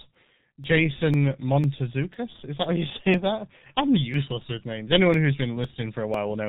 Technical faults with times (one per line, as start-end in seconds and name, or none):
0.00-6.49 G.723.1 codec
0.15-6.14 periodic USB or driver dropouts